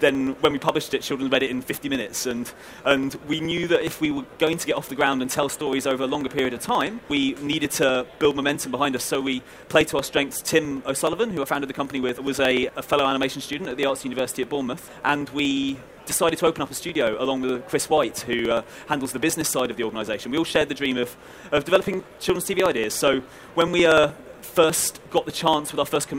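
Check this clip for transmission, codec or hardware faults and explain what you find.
One hardware fault runs through the clip: periodic USB or driver dropouts, from 0.09 s to 26.14 s. Every 0.06 s, about seventeen times a second, the audio driver or USB bus stalls and a few milliseconds are skipped, leaving hundreds of small splices. It sounds like steady ticking heard only under signal. That strict spacing sets it apart from irregular network packet loss.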